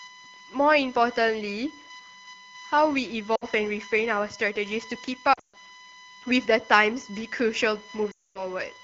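A USB whine runs throughout the speech, a steady 1 kHz tone loudest at its 2 kHz harmonic, roughly 20 dB below the speech, showing as flat horizontal spectrogram lines. Lost AMR speech frames cause concealment gaps at 3.35–3.45 s, 5.33–5.57 s (runs up to 140 ms) and 8.11–8.44 s: the AMR-WB decoder smears held sound into fading, blurred spectrogram patches and shrinking waveform envelopes.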